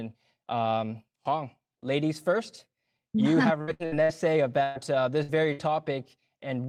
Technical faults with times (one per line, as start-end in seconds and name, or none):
3.61-4.12 repeated packet loss (robotic sound)
4.63-4.78 burst of packet loss
5.23-5.61 burst of packet loss